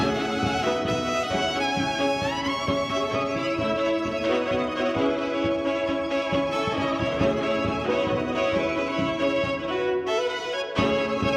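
No technical faults turn up anywhere in the recording.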